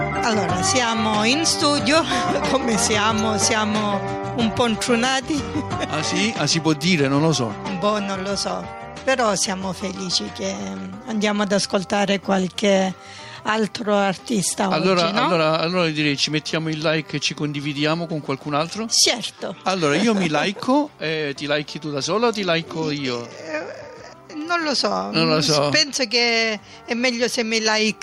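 Gain pumping runs through the whole clip: the gain is pulled down under every loud moment, swinging by roughly 5 dB. Loud and soft parts sit squashed together, likely from input gain set too high with a fast limiter clamping down.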